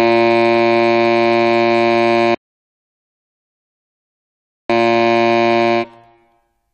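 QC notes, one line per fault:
2.35–4.70 s, rebuffering stall. The music cuts to silence for about 2.35 s. It then picks up exactly where it stopped. The player ran out of downloaded audio and waited for more data. No music is lost, but the playback runs longer.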